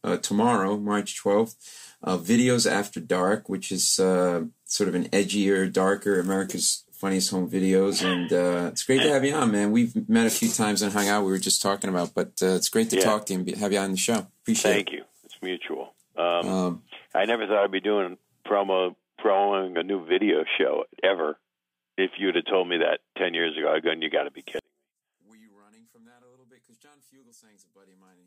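From 24.59 s to 28.26 s the sound collapses by about 35 dB into a faint residue. The likely cause is one channel inverted, with the shared content cancelling on mono summing. Unlike a dropout or fade, a faint difference signal remains.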